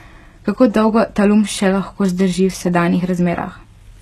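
HE-AAC compression, audible throughout the speech, is the likely cause of the damaged top end. Only the lower spectrum has been coded properly, and the treble is rebuilt by copying lower bands upward under a coarse envelope, which points to a low bitrate near 16 kbps. Nothing survives above 12.3 kHz, and the replicated band does not match the real harmonics, so s sounds come across gritty, metallic and lispy.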